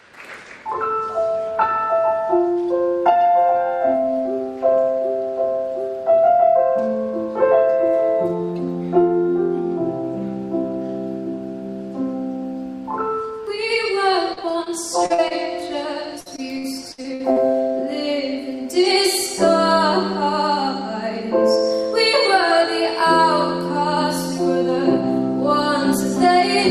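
From 14.33 to 14.68 s there is a burst of repeated packet loss, heard as robotic sound. Four gaps, the longest 32 ms and about 80 ms in all, were each patched by extending the last sound. The result is choppy. On a spectrogram the patches show as short frozen blocks, with harmonics held flat and edges cut abruptly. In the waveform they look like unnaturally regular repeating cycles.

Short concealed packet loss follows at 15.06–15.12 s, 15.14–15.20 s and 15.28–15.32 s. The first two lost 40 ms each and the third 20 ms. In each hole the receiver continued the preceding sound, either from its pitch or as shaped noise, and then crossfaded back into the real signal. Each event is heard as a brief smear or wobble, and a short onset can disappear. A spectrogram shows a narrow band of blurred, over-smooth texture. The waveform shows a small stretch of repeated cycles fading back into the real signal.

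Repeated packet loss returns from 16.20 to 17.38 s and is more severe this time. Nine gaps, the longest 60 ms and about 320 ms in total, leave roughly a quarter of that span concealed. The sound turns choppy and stuttering. On a spectrogram the stretch is a series of smeared, tonal blocks separated by hard vertical seams. The waveform shows looped, periodic segments alternating with the real signal.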